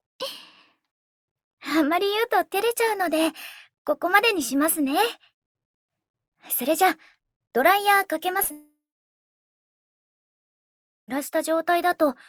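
Packets briefly failed to reach the decoder three times in quick succession, from 8.37 to 8.41 s, 8.43 to 8.47 s and 8.47 to 8.52 s, each gap about 20 to 40 ms. This is short concealed packet loss: the receiver extended the preceding sound to bridge each hole, heard as a quick smeared flutter.

Right after, at 8.52 s, a long network dropout likely cut off the incoming stream for about 2.56 s. The concealment briefly carries the last sound on and fades, then roughly 2.3 s of silence follows until the audio resumes at 11.10 s, with that stretch missing.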